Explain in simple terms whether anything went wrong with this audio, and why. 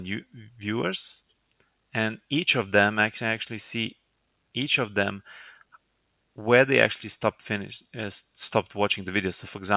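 Nothing went wrong: the audio came through an ordinary call connection working as intended, and its audible marks are the codec's usual coding noise and the narrower, telephone-like tone from having nothing above 4 kHz, which fits a standard G.711 telephone codec.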